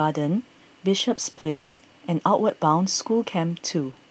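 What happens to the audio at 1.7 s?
At 1.7 s the sound sits inside a long network dropout running from about 1.49 to 1.81 s. The stream was most likely cut off in transit, so the receiver filled the gap by stretching the last sound into a fading buzz rather than silence, and the real audio for that stretch never returns. On a spectrogram the band-limited Opus content, topping out near 8 kHz, smears into blurred, repetitive bands that lose energy; the waveform shows a decaying, regular envelope before the sound resumes.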